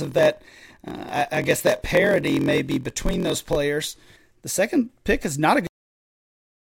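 From 0 to 3.57 s the speech carries a block size mismatch (padded). Each block arrives short and is zero-filled, which fits a 1024-sample read. A gap repeats at about 43.1 Hz, heard as a buzz. Delivery runs at 0.938 speed, pitch roughly unchanged.

At 5.67 s, right after "pick is not a", there is a cut-off end. The final buffers never played. The speech stops mid-sound and drops straight to digital silence, with no decay, through to the end.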